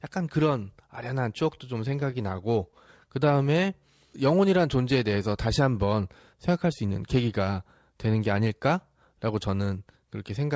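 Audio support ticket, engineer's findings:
Repeated stalls (stutter), 1.55–2.76 s: ten brief dropouts, longest 16 ms, about 99 ms filled by continuing prior sound. Jitter buffer repeatedly ran dry on late packets; nothing lost.

Jitter buffer slow-down, 3.25–4.21 s: playback at 91% speed, pitch unchanged, 91 ms added. Receiver repeating pitch periods to rebuild a low buffer reserve.

Jitter buffer speed-up, 6.33–7.15 s: playback hurried to 107%, same pitch, around 70 ms trimmed. Receiver dropping pitch-period slices to shed excess buffered delay. Band-limited to 8 kHz, consistent with a 64 kbps G.722 call path.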